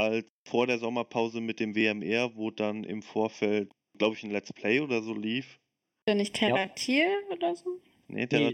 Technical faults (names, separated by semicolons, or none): channel delay (comb filtering)